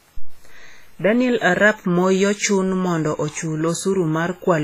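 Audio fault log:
Throughout: WMA compression, likely, given the heavy transform-codec damage across the whole speech clip. The sound rings and washes, with a hiss that rises and falls with the signal, which fits a bitrate around 24 kbps. The encoder's long blocks smear quantisation noise over tens of milliseconds around each sound, and weak spectral lines are zeroed, so fine detail drops out. Nothing is present above 15.2 kHz, where the encoder has cut the band.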